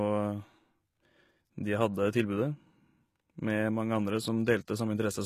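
Throughout the speech, the treble stays bright but sounds synthetic, with gritty, lispy s sounds, likely HE-AAC compression at a low bitrate, around 20 kbps. Copying lower bands upward leaves top harmonics misaligned, unlike a plain low-pass codec, which would sound dull instead.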